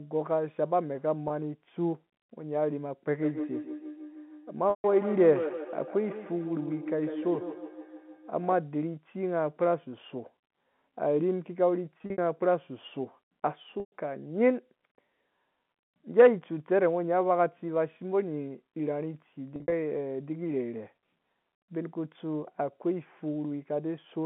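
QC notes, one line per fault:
1.28–1.30, 4.70–4.84, 11.98–12.18, 13.80–13.92, 19.56–19.72 s: packet loss with pitch repetition. At 1.28 s a brief buzzy hold replaces 20 ms of sound, consistent with a single lost packet. The others span 120 to 140 ms. At 4.70 and 13.80 s the hold thins into silence before a short cross-fade back. At 11.98 and 19.56 s the gaps are scattered, with the longest run about 60 ms, so the buzz stutters. The receiver repeats the last pitch period and fades it out to bridge missing data.
3.14–8.65 s: feedback echo between two devices. Each stretch of sound returns at a regular interval of roughly 150 ms. The repeats grow thinner and more ringing with each pass, peaking at about 8 dB below the direct sound. Two devices in the same room are joined on one call, and one plays back what the other's microphone sent. That microphone then picks it up again, and neither echo canceller removes sound played by the other device. 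The telephone-band coding underneath stays clean.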